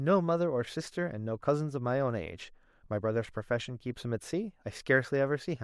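No technical faults are audible anywhere in this speech recording.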